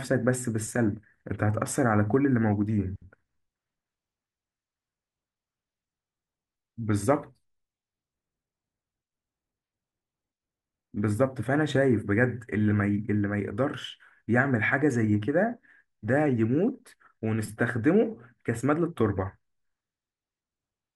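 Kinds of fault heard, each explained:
No faults are audible anywhere in this recording.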